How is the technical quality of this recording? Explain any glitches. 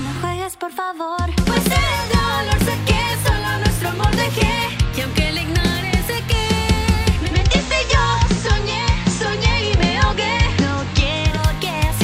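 The recording has one glitch. Digital radio blending to analogue from 7.19 to 11.44 s: the receiver lost its digital stream and cross-faded over about 200 ms to the FM broadcast, so hiss rises roughly 30 dB down, and the level shifts about 1 dB.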